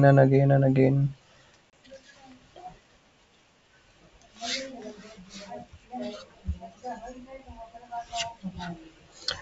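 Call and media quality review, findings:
Packet loss on ADPCM call, 1.70–1.73 s, after "and again and again": 30 ms hard silence, about three packets. Unlike a clean dropout, the G.722 decoder's mistracked predictor leaves speech slightly distorted as it resyncs.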